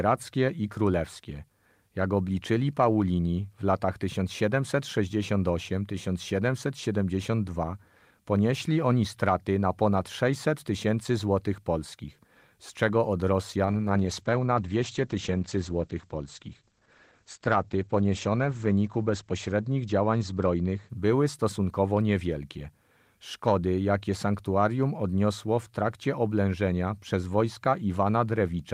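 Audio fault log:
13.66–22.81 s, call bitrate drop: just after "polskich z czego od", the speech turns coarse and watery and loses its brightness, staying at its roughest for about 5.1 s before recovering. The encoder was starved of bits, consistent with a fall from around 32 kbps to around 11 kbps, so it coded more crudely and narrowed the audio band from 20 kHz to 8 kHz. A spectrogram shows everything above 8 kHz abruptly going dark, with smeared, blotchy harmonics below.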